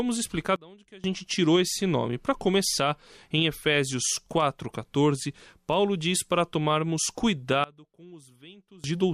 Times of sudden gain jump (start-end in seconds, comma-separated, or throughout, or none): 0.56-1.04, 7.64-8.84